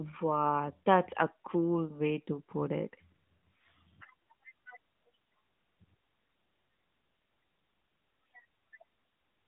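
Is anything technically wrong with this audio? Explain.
Yes, the whole clip has gone through the AMR narrowband mobile codec. This speech is squeezed into a phone line of roughly 150 Hz to 3.7 kHz, with nothing above 3.8 kHz. The vocal-tract model with sparse pulses adds plainly audible buzzy, synthetic colouring, which fits a mid-rate mode around 10 kbps.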